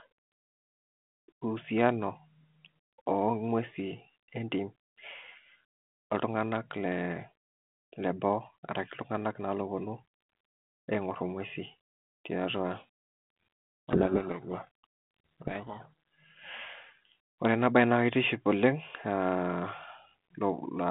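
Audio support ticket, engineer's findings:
Codec payload misread, 12.76 to 15.86 s: speech buried in harsh distortion. Probable cause is G.726 decoder reading code words in the wrong bit order. Line otherwise G.726 at 32 kbit/s.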